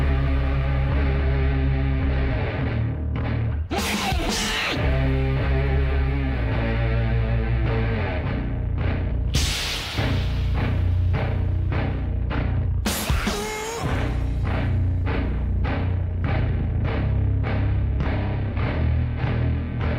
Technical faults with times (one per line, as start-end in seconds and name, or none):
none